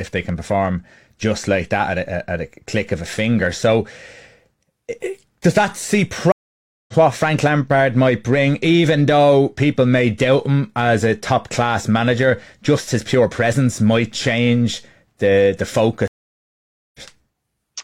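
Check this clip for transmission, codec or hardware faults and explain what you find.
Two faults of the same kind are audible, both stream reconnects. The first runs from 6.32 to 6.93 s and the second from 16.08 to 17.00 s. Each time the connection dropped, playback fell silent while the player reconnected, and a fresh decoder picked the live stream up mid-flow. The gaps last 0.56 s and 0.87 s. The speech then resumes roughly 0.7 s further on, so a stretch is skipped, and the opening frame or two come in muted or fading up.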